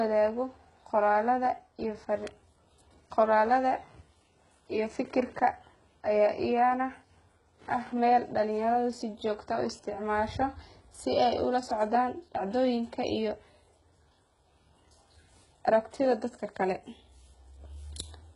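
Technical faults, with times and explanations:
Throughout, HE-AAC compression: the speech has nothing above 11.1 kHz, and its upper band sounds synthetic, with sibilants coming out gritty, metallic and lisping. The likely cause is heavy coding that keeps only the lower spectrum and rebuilds the treble by copying lower bands upward under a coarse envelope, so the copied harmonics fail to line up with the real ones, which fits a very low bitrate around 12 kbps.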